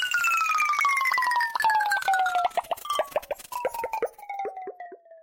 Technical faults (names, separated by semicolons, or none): none